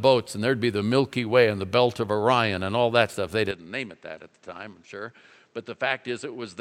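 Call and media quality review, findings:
Speech turns duller from 3.51 s to the end, with no gap at the change. Likely input switched to a poorer device. Spectrogram: content stops near 8.3 kHz, new noise floor roughly 40 dB down. Waveform: level drops about 5 dB.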